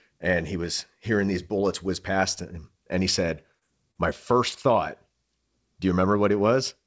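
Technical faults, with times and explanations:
3.59–3.64 s, 3.91–3.98 s and 4.49–4.54 s: short concealed packet loss. About 30 ms of audio failed to reach the decoder in time at each point. The receiver covered each gap by extending the preceding sound for 23 ms, 36 ms and 24 ms, then blended back into the real audio. Each spot is heard as a brief smear or wobble in the speech. The surrounding call audio stops at 8 kHz, which fits a wideband codec such as G.722.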